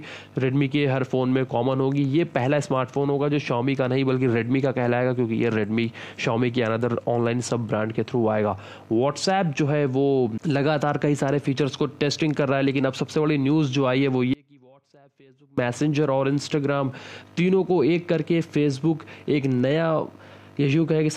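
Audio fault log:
14.34–15.58 s, audio dropout to a faint residue: the sound cuts out abruptly mid-flow and for about 1.24 s only a faint leak of it remains, roughly 30 dB below its normal level, before it snaps back just as suddenly. The hard edges rule out a pause or a fade. The likely cause is a brief loss of the wanted signal while the path after the break stayed live, passing only this weak residue until the connection was restored.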